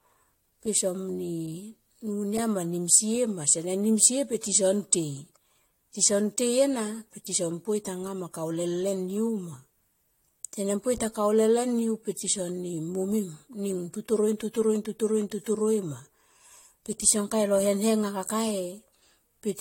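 Generation loss runs throughout this speech: swirly, hollow smearing, blurred attacks, nothing above 16.6 kHz, likely from about three re-encodings, fitting a 64 kbit/s AAC-LC chain.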